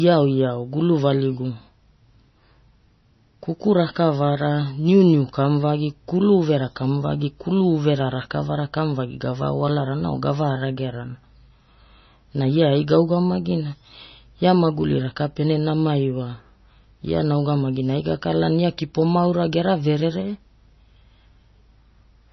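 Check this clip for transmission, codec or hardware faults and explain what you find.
One fault runs through the whole speech clip. Heavy MP3 compression is the likely cause: short of bits, the encoder removed everything above 5.9 kHz and let weak frequency lines drop in and out frame to frame. The result is dull, watery speech with swirling, metallic s sounds and smeared consonant attacks, all pointing to a very low bitrate of around 24 kbps.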